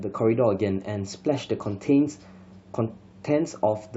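No technical faults occur at any point in the recording, so there is nothing to describe in time order.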